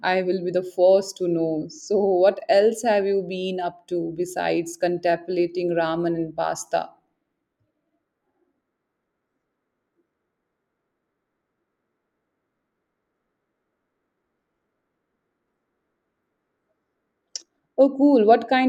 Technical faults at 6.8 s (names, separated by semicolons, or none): none